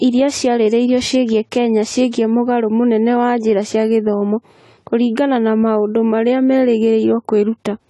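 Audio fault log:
Throughout: AAC compression. Nothing above 11.5 kHz, so the speech sounds dull and smeared with an audible warble, likely from an AAC-LC encode at around 32 kbps.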